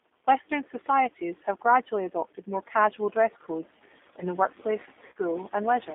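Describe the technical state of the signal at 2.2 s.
G.729 codec coding runs through 2.2 s as across the whole clip: speech rebuilt from a vocal-tract model and sparse pulses sounds rough and synthetic, band-limited to 250 Hz–3.6 kHz, fitting an 8 kbit/s stream.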